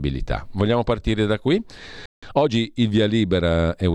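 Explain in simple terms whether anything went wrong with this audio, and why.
Right after "partire da qui", the speech cuts out at 2.06 s and stays silent until 2.23 s, about 0.17 s. This is a playback stall. The player likely ran out of data, or was briefly blocked, so nothing came out until it recovered.

Straight after that, from 2.23 to 2.55 s, the speech rushes at about 1.5 times normal speed. The pitch stays the same. This is time-compressed catch-up. The player trims small pieces to make up lost time.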